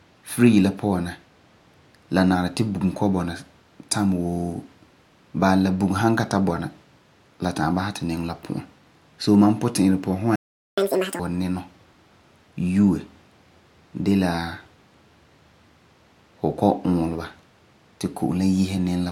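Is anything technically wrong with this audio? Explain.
Yes, there are two related playback faults.

A playback stall from 10.36 to 10.78 s, likely from the player running out of buffered data, cuts the speech to silence for about 0.42 s.

A catch-up at higher speed follows from 10.78 to 11.19 s. The player resamples its backlog at 2x, so the speech rushes and rises roughly ten semitones before settling back.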